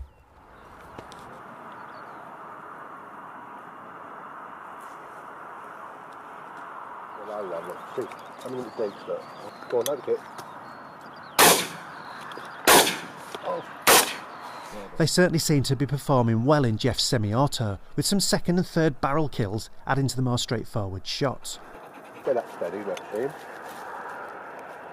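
No technical faults can be heard anywhere in this recording; the signal carries through without any breaks, distortion or level problems.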